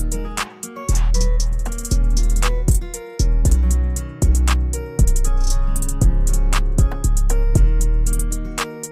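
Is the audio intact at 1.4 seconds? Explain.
Yes, at 1.4 seconds the audio is intact, with no dropout, click, distortion or other fault at that moment.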